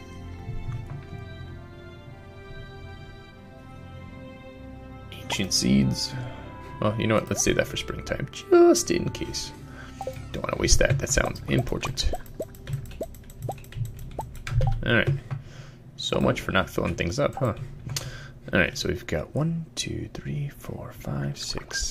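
Nothing technically wrong stands out here; the audio runs along without any faults to point to.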